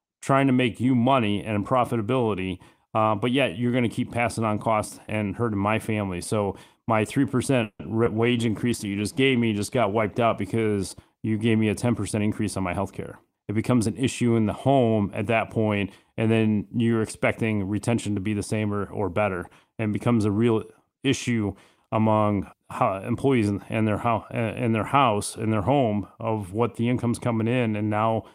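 From 7.63 to 7.81 s the sound stretches into a short buzzing continuation that fades to about 60 ms of silence, then resumes exactly where it stopped, about 160 ms late with nothing lost. This is likely a call audio freeze: packets were held up in transit, the jitter buffer ran dry, and the receiver padded the wait by extending the last sound.

Between 8.04 and 8.08 s there is a brief smear. This is short concealed packet loss. About 20 ms of audio never reached the decoder in time, so the receiver invented a stand-in from the preceding sound and blended it back into the real signal.

From 8.18 to 11.32 s, ending just before "gave me a", the speech turns rough and dull, at its worst for about 1.8 s. This call bitrate drop fits the encoder falling from about 40 to 16 kbps after the bandwidth estimate fell. That forces coarser coding and trims the highs.

From 12.16 to 13.87 s, between "gave me a" and "an issue in the", the speech sounds hurried, running about 9% fast at unchanged pitch. 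This is a jitter buffer speed-up. The buffer had overfilled, so the receiver cut roughly 150 ms in tiny pitch-period slices to bring the delay back down.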